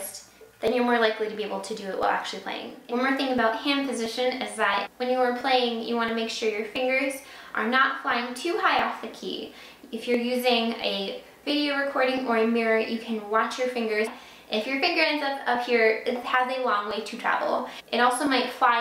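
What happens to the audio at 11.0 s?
Regular clicks recur every 0.68 s from 0.68 to 18.27 s, so 11.0 s falls inside a run of clock drift buffer slips. The likely cause is two clocks about 1000 ppm apart, with roughly 30 samples dropped or repeated each time. A spectrogram shows evenly spaced thin vertical broadband lines, and the waveform shows step discontinuities.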